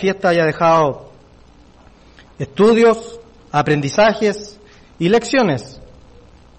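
You'll hear three single sharp clicks at 0.77 s, 3.16 s and 5.18 s, each a thin vertical line in the spectrum. Each is likely dropped samples, a tiny fraction of a millisecond missing, so the waveform jumps abruptly without losing any audible sound.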